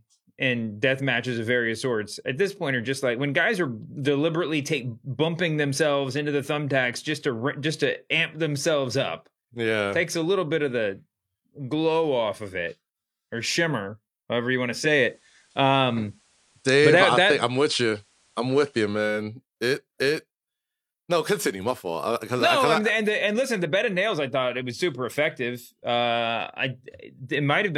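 From 14.63 s to 19.27 s, a faint hiss appears some 40 dB below the speech and the level shifts about 3 dB. This is digital radio blending to analogue: the receiver lost the digital signal, cross-faded over 392 ms to FM, then returned.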